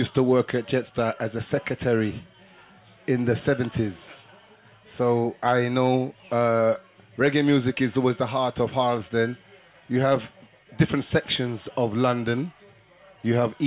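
No technical faults can be heard anywhere here.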